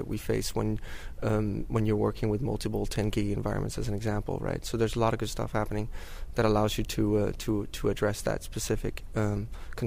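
No technical faults can be heard anywhere in the recording.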